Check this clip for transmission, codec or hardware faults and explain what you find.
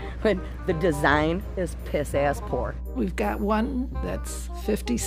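There's one fault here: mains hum, running the whole way through the clip. It's a steady low tone at 60 Hz, with some low harmonics stacked above it, and it sits only a few decibels under the wanted sound, so it's hard to miss. What's happening is that the power line is bleeding into the signal path, most likely through a ground loop or a transformer sitting too close to the cabling or gear.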